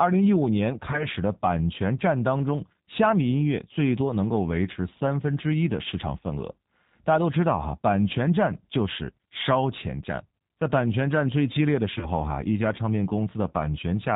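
From the start the speech sounds band-limited, with nothing above 4 kHz, and has a slightly rough, synthetic edge that is plainly audible throughout. This is the G.729 codec, whose character fits 8 kbit/s operation. Rather than storing the waveform, it rebuilds each 10 ms frame from a vocal tract filter, a pitch predictor and a handful of pulses, so fine detail and breathiness are replaced by an approximation.

At 0.91 to 1.07 s and again at 11.99 to 12.06 s the speech is briefly stretched into a buzzy tone or coloured noise that sags in level before normal sound recovers. This is VoIP packet loss concealed by the speech codec, and each gap fits a single 20 ms packet going missing. The decoder filled the hole by repeating its last pitch and filter with falling gain, and because each frame depends on the one before, the effect lingers past the missing 20 ms.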